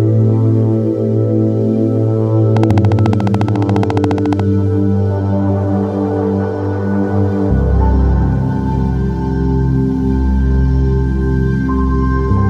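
Interference from nearby equipment or a faulty connection or power supply is the likely cause of a train of clicks from 2.57 to 4.41 s: some thirty near-identical pulses at a regular 14.2 per second, about 10 dB above the sound, heard as steady, evenly spaced ticking.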